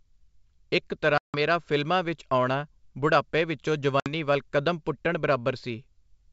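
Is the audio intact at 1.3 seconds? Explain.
No. From 1.18 to 1.38 s there is packet loss on an ADPCM call. About 160 ms of speech, several packets' worth, drops into a hard-edged silent gap. ADPCM decodes each sample as a change from a predicted value. The receiver's predictor and step size therefore drift away from the sender's during the hole. When the audio returns it comes in with some distortion. It then settles over a few tens of milliseconds.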